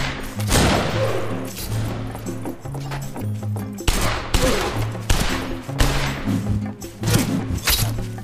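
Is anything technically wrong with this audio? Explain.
No, nothing technically wrong can be heard in this audio, and the signal holds steady throughout with no dropouts, glitches or level problems.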